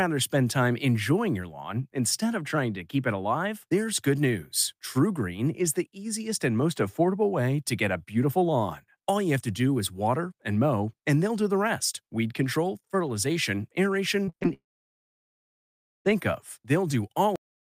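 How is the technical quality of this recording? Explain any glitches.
The recording has three clear glitches in its final seconds.

From 14.25 to 14.51 s, right after "rest weed control fertilization", repeated packet loss leaves six gaps patched by repeating the previous sound, giving choppy sound with pieces missing that appears as smeared, striped spectrogram blocks.

From 14.53 to 16.07 s the audio disappears, likely from a long network dropout. A brief continued tone fades into about 1.4 s of flat, near-empty waveform, then the audio resumes with that stretch lost.

At 17.36 s there is a cut-off end. The audio stops mid-sound with no decay, so the waveform ends abruptly and the spectrogram shows a sharp vertical edge.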